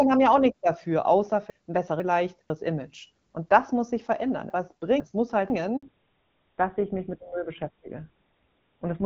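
At 1.5 to 2.5 s and again at 4.5 to 5.5 s, chunks play out of order: a 500 ms piece arrives one chunk late and swaps with its neighbour. Unlike a dropout, nothing goes missing, but the sound jumbles across hard joins. At 5.77 s a handover gap silences the call for 60 ms. The sound cuts out cleanly instead of glitching or repeating, because no frames arrived during the network switch. From 5.83 s to the end, a fallback to narrowband removes everything above 4 kHz. The light wideband AMR-WB (HD Voice) character before it turns duller and rougher, which points to a GSM full-rate codec, not to a simple volume or level change.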